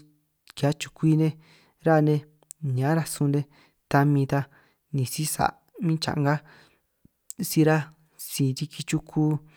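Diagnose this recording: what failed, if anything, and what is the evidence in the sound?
No faults detected in this recording.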